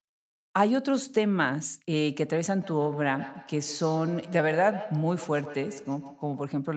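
From 2.62 s to 6.58 s there is feedback echo between two devices: a second device in the same room on the call is playing back this microphone's signal, and the microphone picks it up again, beyond the reach of its own echo canceller. Each stretch of speech returns roughly every 150 ms as a thinner, ringing copy, peaking about 13 dB below the speech, with the repeats trailing behind every phrase until the loop ends.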